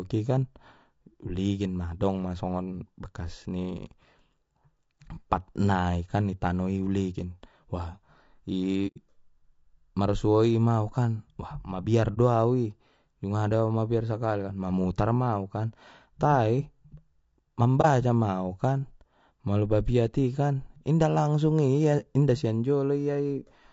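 Throughout the speech, a rough, grainy texture with noise filling the gaps between harmonics points to low-delay AAC compression, likely AAC-ELD at around 32 kbps. On a spectrogram, the harmonic stripes look smeared and the top band looks blotchy.

At 8.87–8.98 s, 12.14–12.18 s and 17.81–17.86 s, AAC frame loss with muting leaves a soft-edged hole and two brief dips where the decoder zeroed lost frames. The first hole is about 90 ms, which fits three frames lost. The waveform tapers out and back in, and the spectrogram shows clean vertical gaps.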